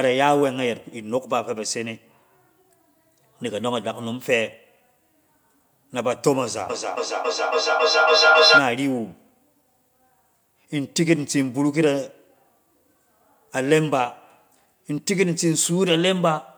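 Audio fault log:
6.7 to 8.71 s, feedback echo between two devices. The speech starts coming back at a steady interval of about a third of a second. Each return sounds thinner and more ringing than the last. The repeats do not fade. They pile up until they are about 5 dB louder than the speech itself. A second device in the same room is playing this sound aloud. The microphone hears it again, and its echo canceller cannot remove sound from another device.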